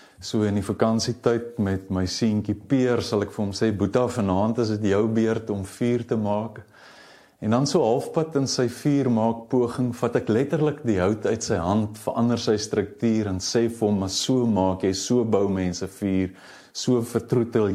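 No technical faults can be heard anywhere in the audio.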